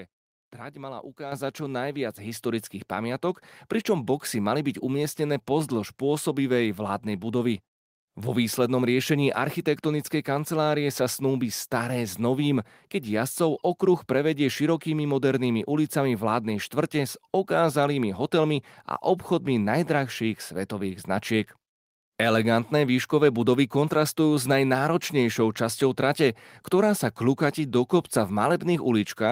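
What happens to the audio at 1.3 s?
At 1.32 s the microphone volume is stepped up: the software judged the input too quiet and raised the device's gain in a single step of about 7 dB. The speech and the room background jump louder together, with no fade. On a waveform the envelope widens abruptly at that instant and stays wider; on a spectrogram every frequency band brightens at once along a sharp vertical boundary, noise floor included.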